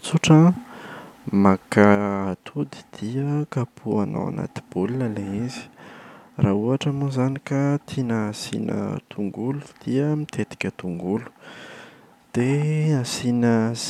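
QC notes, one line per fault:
1.95 s to end, sudden gain jump: speech and background noise drop together by about 8 dB in one step, no fade, likely an unramped gain change.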